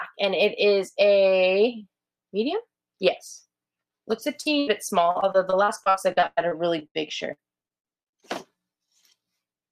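From 4.07 to 8.24 s, repeated packet loss (robotic sound) leaves 24 gaps up to 106 ms, patched by repeating sound: choppy waveform breaks, duplicated spectrogram slices.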